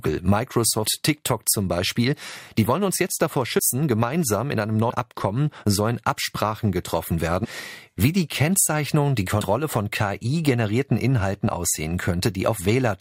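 At 3.58 s, after "wollen uns jetzt davor", compressed frames are skipped. Roughly 70 ms of speech vanishes before "gemeinsam in einem". At 7.43–7.46 s, about 150 ms drops before "wie die". At 9.40 s, about 70 ms goes.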